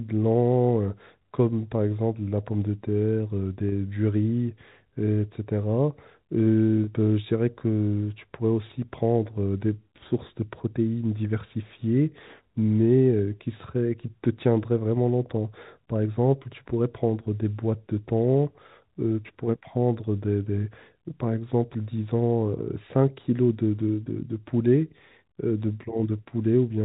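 At 3.69 s and 6.84 s, packet loss with pitch repetition fills a 30 ms gap by looping the last pitch period. Each loss sounds like a brief held, buzzy tone on the narrowband G.711 telephone sound, not the hard silence or click of a plain dropout.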